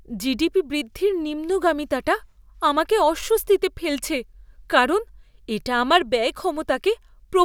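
No technical faults are audible.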